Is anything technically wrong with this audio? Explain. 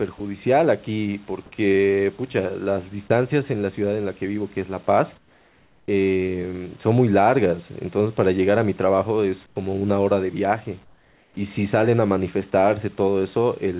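Yes. The sound has three kinds of voice-detector fault, all consistent with a call whose bandwidth stops at 4 kHz, which fits G.711 A-law at 64 kbps.

Sound dropped by the voice detector occurs at 0.18 to 0.20 s and 3.08 to 3.10 s. Each time, about 20 ms gives way to flat noise, with about 20 ms of speech lost the first time and 10 ms the second. The likely cause is that the sender's detector briefly judged the speech to be background and stopped transmitting, so the receiver filled the gap with comfort noise. A packet-loss gap would differ: it leaves silence or a repeated, smeared fragment, while here the gap holds steady, even hiss.

Comfort noise in place of the background appears from 5.18 to 5.88 s, 9.46 to 9.56 s and 10.84 to 11.36 s. In these pauses the real room noise, with its small fluctuations, is swapped for a smooth, featureless hiss about 8 to 9 dB quieter. The likely mechanism is discontinuous transmission: once no speech was detected, the sender sent only occasional noise descriptions, and the receiver synthesised a rough match. 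The drop in level and texture at each pause edge is what separates this from a recording that simply has a quiet room.

Onset clipped by the voice detector occurs at 5.85 to 5.88 s, at the end of the first comfort-noise stretch. Speech resumes abruptly, with about 30 ms of its beginning missing and only synthetic noise in its place. The likely cause is a detector that reacted late when sound returned, so the soft start was never sent. Unlike a hard-gated mute, the audio before the cut is hiss rather than true silence, and the attack sounds sliced rather than faded in.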